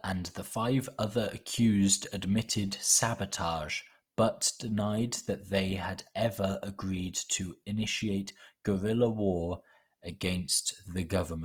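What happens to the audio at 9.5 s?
At 9.5 s the speech sounds rough and grainy, with a noisy, gritty texture over the harmonics rather than swirling or hollow gaps, and the damage is plainly audible. It isn't a momentary event; the same texture runs through the whole clip. The likely cause is Opus compression in its CELT music mode. At a low bitrate, which fits roughly 24 kbps, the encoder keeps the energy in every band but fills short-changed bands with folded or noise-like content, which makes the sound grainy.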